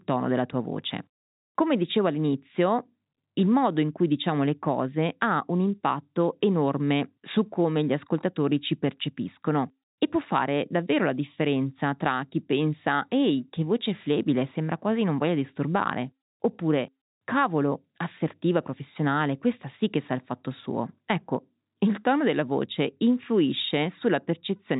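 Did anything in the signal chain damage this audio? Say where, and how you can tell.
No, nothing in the chain damaged this speech.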